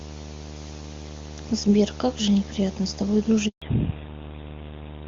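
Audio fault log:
Throughout: video or display buzz, a steady 75 Hz field-rate hum with hash above it, roughly 15 dB below the speech; the spectrogram shows a 75 Hz harmonic comb.
3.48 to 3.62 s: handover gap, 140 ms where speech fades out and falls silent while the call switches networks; the waveform shows a flat, empty stretch.
3.62 s to end: fallback to narrowband, with everything above 4 kHz gone, so speech turns dull and rough, consistent with a drop to GSM full rate; the spectrogram is cut flat at 4 kHz.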